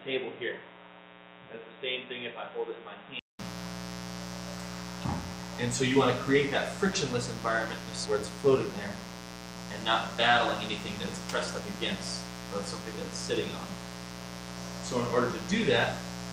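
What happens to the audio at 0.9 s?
At 0.9 s the sound sits inside a stretch from 0.0 to 3.39 s where the input was likely switched to a poorer device. Nothing passes above 3.8 kHz, so it sounds dull and boxy, about 10 dB quieter, with a new noise floor roughly 35 dB down. Unlike a plain low-pass filter, it ends with a 200 ms silence at the switch back to the fuller input.

Running under it, as through the whole clip, is a mains buzz at 60 Hz, loud at roughly 10 dB below the signal. Switching spikes twice per cycle spread harmonics up into the kilohertz range, so it rasps rather than hums as a pure low tone would.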